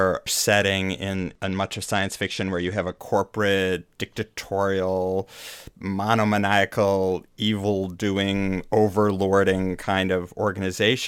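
From 1.15 s to 2.97 s the speech goes through a Bluetooth SBC bit pool drop: the link throttled the encoder, which fits a fall from a bit pool of 28 to 12, around 96 kbps. Upper sub-bands lose their bits, so treble dulls and gritty quantisation noise rises until recovery.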